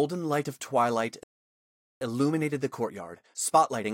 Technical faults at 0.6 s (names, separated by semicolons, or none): none